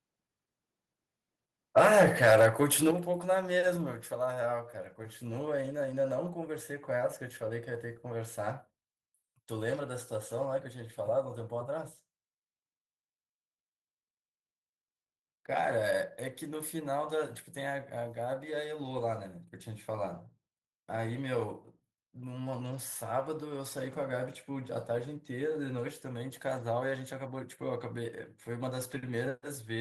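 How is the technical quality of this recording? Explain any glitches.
There is one glitch, a microphone volume stepped down at 2.91 s. The call software likely judged the input too hot and cut the device's input volume in a single step. Speech and background both drop suddenly by about 9 dB and stay quieter.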